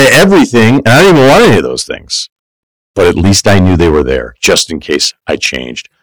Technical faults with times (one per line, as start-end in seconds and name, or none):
0.00-6.03 hard clipping